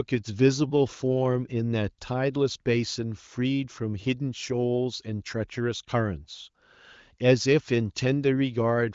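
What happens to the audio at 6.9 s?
Nothing goes wrong at 6.9 s; the speech runs on intact there, with only the ordinary band limit of the AMR wideband (HD Voice) codec, which carries nothing above about 7.5 kHz.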